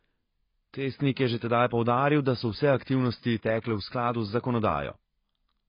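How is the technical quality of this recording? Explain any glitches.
Technical quality is poor, with heavy coding damage throughout. For the full clip the speech sounds dull and smeared, with a warbling, fizzy texture on sustained sounds and sibilants and nothing above 5 kHz. This is likely AAC compression (AAC-LC) at a low bitrate near 16 kbps. Starved of bits, the encoder lowers the cut-off and quantises coarsely, leaving holes in the spectrum.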